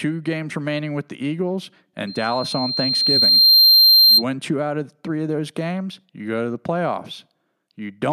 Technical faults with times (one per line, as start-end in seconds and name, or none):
2.07-4.24 loudspeaker feedback squeal